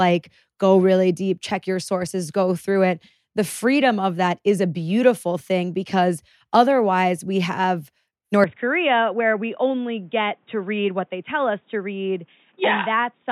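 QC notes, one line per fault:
8.44–13.32 s: input switched to a poorer device. With no gap at the changeover, the speech abruptly turns dull and boxy: the band narrows, the level falls by roughly 5 dB, and a new background noise floor appears roughly 40 dB under the signal. This is likely the recording input jumping mid-take to a different microphone or a headset's call-mode path, whose narrower bandwidth, gain and self-noise replace the original chain's through the end.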